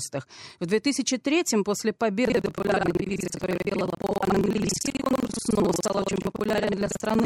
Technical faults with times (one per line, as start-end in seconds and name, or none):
2.23-7.25 buffer tearing